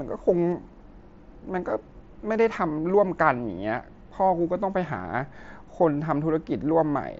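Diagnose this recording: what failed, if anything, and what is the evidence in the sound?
Concealed Bluetooth headset packet loss at 0.51 s: about 15 ms of speech is patched with repeated recent waveform, so it is filled in rather than left as a silent dropout.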